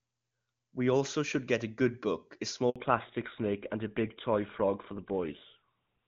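At 2.70 s a handover gap opens. The call switches networks, no speech frames arrive for 60 ms, and the sound dies away fast, silent until 2.76 s. A lost packet would usually leave a concealment buzz or repeated fragment. This is a clean hole.

From 2.76 s to the end comes a fallback to narrowband. The link drops from AMR-WB, clear beforehand and consistent with its 23.85 kbit/s mode, to GSM full rate, removing everything above 4 kHz. Unlike a plain low-pass filter, the speech also turns rougher as well as duller.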